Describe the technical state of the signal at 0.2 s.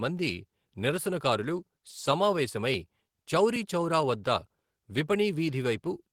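At 0.2 s the speech signal is intact, with no audible technical fault at that moment.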